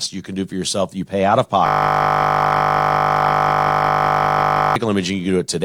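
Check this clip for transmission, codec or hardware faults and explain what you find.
A system hang loop occupies the middle of the clip. From 1.66 s to 4.76 s, just after "you pay out of", the driver stalled while the hardware kept replaying its ring buffer. A 20 ms slice repeats at 50 Hz, producing a steady buzz.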